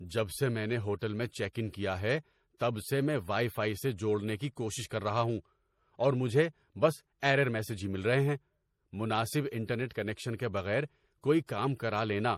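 Throughout the speech, likely MP3 compression at a low bitrate near 40 kbps: nothing above 15.2 kHz, and on a spectrogram a hard ceiling with flickering, patchy high bands that sound watery.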